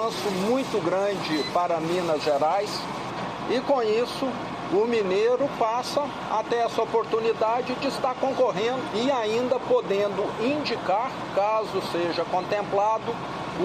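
Nothing goes wrong anywhere in this one; there's simply no fault to point to at any moment.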